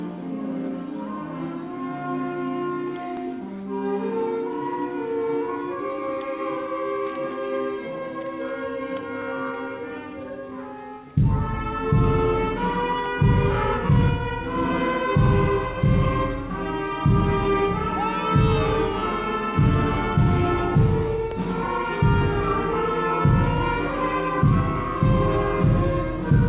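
The audio was processed in chunks that overlap, so each new chunk begins about 47.9 ms before the previous one ends and that stretch is played a second time. This overlapping-chunks fault shows up as a brief stutter with a click at the join, from 3.17 to 3.22 s and again from 21.31 to 21.36 s. The spacing of the joins fits a chunk length of 6 s. The audio also passed through a call path, and nothing in it lies above 4 kHz, which fits G.711 telephone coding.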